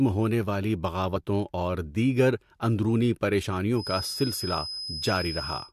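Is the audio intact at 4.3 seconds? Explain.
No: a feedback whistle runs from 3.73 to 5.73 s, a thin 5.1 kHz tone that swells and fades slowly, about 10 dB below the speech, likely from a loudspeaker-to-microphone loop held just short of runaway.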